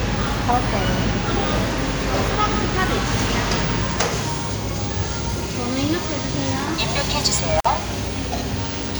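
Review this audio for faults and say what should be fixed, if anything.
An intermittent contact fault occurs from 7.59 to 7.66 s. A loose cable or plug briefly loses connection, so the sound drops out for about 52 ms with crackle at each edge and faint hiss while the line is open. Reseat or replace the affected cable and connectors, and strain-relieve them so they cannot shift during recording.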